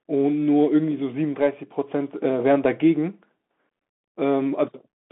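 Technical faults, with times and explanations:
throughout: Bluetooth CVSD headset codec. The speech passes through a one-bit adaptive delta-modulation link, consistent with 64 kbps CVSD, confining it to 200 Hz–3.5 kHz with nothing above 3.8 kHz. The lagging step size makes s sounds scratchy, with a granular hiss under the speech, and the codec damage is plainly audible.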